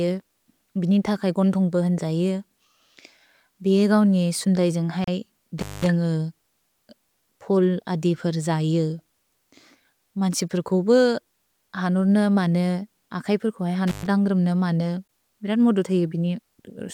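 Gap at a join of encoded pieces, 5.04 to 5.08 s: separately encoded sections were butted together untrimmed, so encoder delay and end padding leave a 34 ms silence with smeared edges before the speech resumes.

Intermittent contact, 5.58 to 5.87 s and 13.87 to 14.07 s: a loose connection briefly opens, cutting the sound for about 200 ms and then 120 ms, with crackle at each break and faint hiss underneath.

Gap at a join of encoded pieces, 15.08 s: the next join, 10 s after the first, leaves a shorter 16 ms hole.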